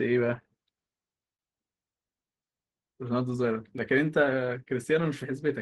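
At 3.78 s the speech is interrupted by a block of digital silence only 1 ms long: the output briefly went silent, so it is heard as a tick or a dip. A waveform shows a brief flat, near-silent stretch; a spectrogram shows a thin vertical broadband stripe.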